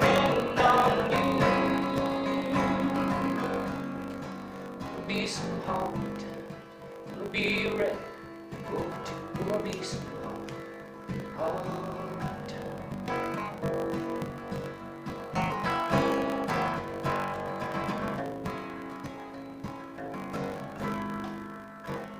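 A block size mismatch (truncated) runs throughout the audio: a steady 50 Hz buzz, with everything playing 1.16 times fast at near-normal pitch, which fits 1024-sample blocks losing their tails.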